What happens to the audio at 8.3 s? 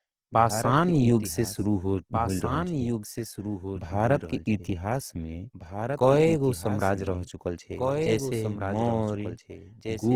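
At 8.3 s the speech is heard twice: a doubled audio track runs through the whole clip, with a second full-band copy trailing the original by about two seconds and sitting somewhat quieter. This is most likely a second capture path or an edit holding two copies out of step. Unlike an echo or reverb, the trailing copy has no decay and no room colour, and it does not fade away over repeats. It is a single clean duplicate at a fixed lag.

The same moment also carries Opus compression, present throughout and plainly audible. The likely cause is an Opus encoder in its CELT music mode at full bandwidth, starved for bits at a rate that fits roughly 16 kbps. To preserve each band's energy, the encoder fills bands it cannot afford with folded lower bands or noise. The speech therefore turns rough and grainy, with a noisy texture on tonal parts, rather than the swirly, hollow watering of MP3. The bandwidth stays wide, so it does not have the muffled hoarseness of Opus's speech mode.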